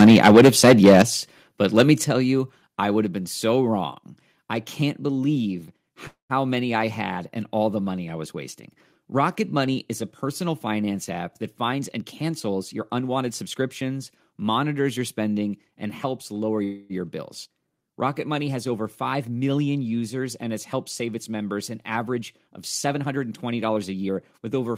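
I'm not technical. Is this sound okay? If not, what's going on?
No, there are a few problems.

Right at the start, from 0 to about 1.02 seconds, and again briefly around 1.78 to 1.91 seconds, you'll hear a harsh, crackly edge on the loudest bits. That's microphone overload. The mic was likely set too hot, so the tops of the loudest sounds got chopped off.

At 1.02, 2.04 and 3.06 seconds the whole thing suddenly gets quieter, background included, each drop smaller than the last. That's the microphone volume being stepped down, likely the call software reacting to that overload by turning the mic input down in steps.

Around 6.07 to 6.33 seconds, and again around 16.64 to 16.93 seconds, the sound briefly hangs. The last bit is stretched into a fading buzz, with a short silent gap in the first one. These are call audio freezes, likely caused by data arriving late. The sound then picks up where it left off, just a quarter-second or so later, with nothing actually lost.

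From 11.63 to 13.43 seconds the speech runs about 12% faster, and from 22.13 to 24.50 seconds about 10% faster. The pitch stays the same, but it sounds rushed. That's a jitter buffer speed-up: the call was running behind, so tiny slivers of sound were snipped out to catch up.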